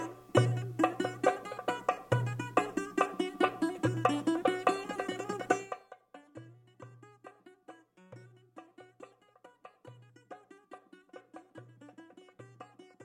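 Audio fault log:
No faults heard.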